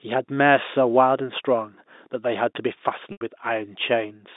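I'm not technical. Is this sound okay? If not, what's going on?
No. Packet loss with pitch repetition hits at 3.12 to 3.21 s: about 90 ms of speech went missing, so the last sound was briefly repeated and faded out, leaving a short buzzy hold and dip.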